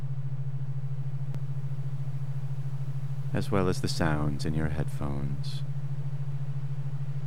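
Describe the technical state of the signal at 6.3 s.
At 6.32 s there's a tiny skip where around ten milliseconds of sound just vanish and the two sides butt straight together. That's audio missing between chunks, likely from the recorder dropping a sliver while handing off from one 2.5 s block to the next.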